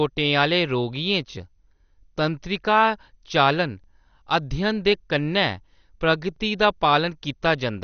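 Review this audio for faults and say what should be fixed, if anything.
MP2 compression throughout: the speech sounds dull, with nothing above 6.5 kHz and a gurgling, granular texture. This is likely MPEG Layer II coding at a low rate, which fits about 48 kbps. Starved of bits, the encoder shuts off upper sub-bands and coarsely quantises the remaining ones. Fix it by encoding from the original source at a higher bitrate or with a more efficient codec.

Overlapping chunks at 3.84 to 3.86 s, between "तंत्रिका चालन" and "अध्ययन दे कन्नै", and at 6.36 to 6.39 s: each join produces a brief stutter. The audio was handled in 2.5-second chunks that each began 25 ms before the previous one ended, so that 25 ms plays twice. Fix it by trimming or crossfading the overlap when the chunks are joined.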